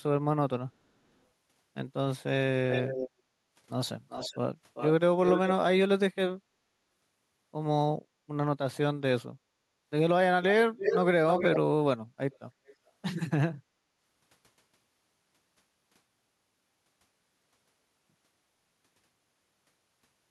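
Echo leak: delayed scraps of the speech return at 2.7, 4.09, 4.74 and 5.22 s, 395 ms late. They return again at 10.78, 11.29, 12.31 and 12.66 s, 319 ms late. Most are fairly loud, and the last two are faint. The likely cause is a loudspeaker echo canceller passing pickup back.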